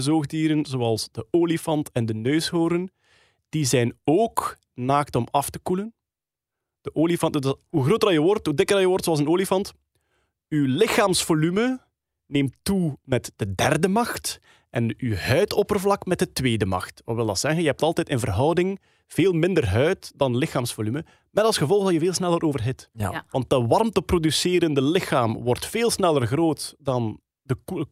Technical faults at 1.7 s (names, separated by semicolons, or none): none